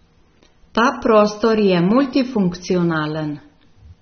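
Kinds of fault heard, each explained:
AAC compression: The speech was likely pushed through an AAC-LC encoder at a bitrate near 27 kbps, too few bits for the content. Nothing remains above 6.3 kHz, and the coarsely quantised spectrum beneath leaves the sound plainly dull and smeared throughout.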